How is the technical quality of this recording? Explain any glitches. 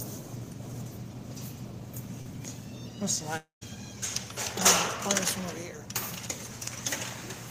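Two glitches stand out, both from audio going missing in transit.

At 2.21 to 2.27 s there's a short concealed packet loss. About 40 ms never reached the decoder in time, so the receiver extended the last sound it had to bridge the gap, then blended back into the real audio. It sounds like a quick smear or wobble lasting a few hundredths of a second, with the underlying sound briefly blurred.

The bigger one runs from 3.37 to 3.63 s. The sound carries on as a fading buzz or hiss for a moment, then drops to about 130 ms of silence before the real audio returns. About 240 ms is gone. That pattern is likely a long network dropout: nothing arrived for a quarter of a second, the receiver stretched the last sound until it ran out of road, and playback resumed past the missing stretch.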